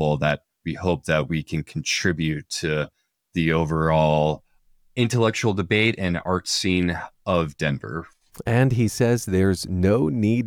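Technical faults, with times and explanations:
No technical faults can be heard anywhere in the speech; the signal stays steady and intact throughout.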